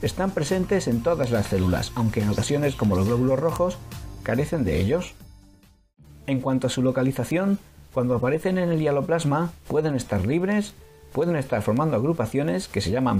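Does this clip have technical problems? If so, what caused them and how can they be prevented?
Yes. Word clock ticks run from 0.17 s to 13.02 s: around seventy sharp clicks, roughly every 0.2 s, of uneven strength. The receiving device was running on its own clock, about 150 ppm off the sender's, so each time the clocks slipped a single sample was dropped or repeated. A spectrogram shows evenly spaced thin vertical lines across the full frequency range, and a zoomed waveform shows a one-sample step at each tick. To prevent it, lock the receiver to the incoming word clock or the digital signal itself.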